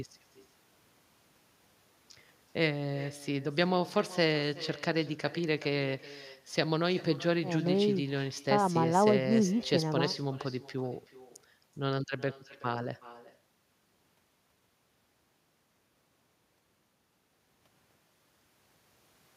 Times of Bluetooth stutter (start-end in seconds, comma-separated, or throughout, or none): none